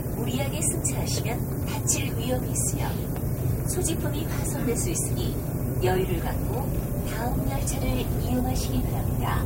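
Low bit depth with noise shaping runs through this recording of sounds from start to finish. At 7 bits, the rounding error is pushed upward into a thin hiss, roughly 15 dB below the signal, that climbs toward the top of the band.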